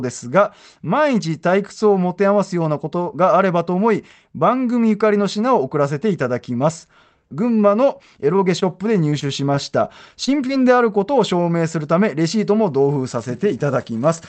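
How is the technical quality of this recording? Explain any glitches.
The recording has network glitches clustered between 8.4 and 10.5 seconds. The audio comes through a call path whose top end stops at about 8 kHz, which fits Opus at around 32 kbps.

Two short stalls from a late packet occur at 8.36 to 8.40 s and 8.60 to 8.64 s. Each time, a packet missed its playout slot and the jitter buffer ran dry. The receiver stretched the last sound by about 20 ms and 17 ms, then resumed exactly where it left off. Nothing is lost, but the sound briefly hangs with a slight buzz or dip.

Repeated packet loss, heard as robotic sound, runs from 9.10 to 9.59 s. The stream dropped packets four times in quick succession, with the longest gap lasting 20 ms. About 40 ms of real audio never arrived, and roughly 70 ms was synthesized by extending the preceding sound, which is about a seventh of the stretch. 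The close spacing of these patches makes the passage choppy, with small pieces missing.

Two short concealed packet losses occur at 10.25 to 10.29 s and 10.47 to 10.51 s. Each time, about 20 ms of audio failed to reach the decoder. The receiver bridged the hole by continuing the previous sound, using its pitch where it was voiced and shaped noise where it was not, then crossfaded back into the real signal. Each loss is heard as a brief smear or wobble, and a short consonant-like sound may drop out.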